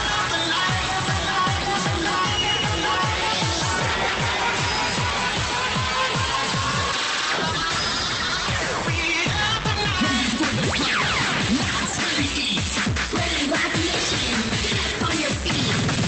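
No technical faults can be heard anywhere in the clip. The sound has gone through a WebRTC call path that is working as intended, its content stopping at about 8 kHz, which fits an Opus link running at around 32 kbps.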